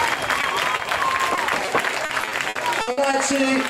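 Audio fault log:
0.41–0.45 s, 0.77–0.81 s, 1.35–1.39 s, 1.65–1.69 s: short concealed packet loss. In each of these four spots about 20 ms of audio failed to arrive in time, and the receiver bridged the hole by extending the preceding sound, pitched if it was tonal and as shaped noise if not, before blending back into the real signal. Each one comes across as a brief smear or wobble, and a very short sound landing in the hole can disappear.
2.05–3.15 s: repeated packet loss (robotic sound). Over this 1.1 s stretch the stream dropped out eight times, with the longest hole about 60 ms. Around 300 ms in total, roughly 27% of the span, is synthetic fill. Because each patch repeats the last sound and the next loss arrives before the audio recovers, the passage turns choppy, with fragments missing.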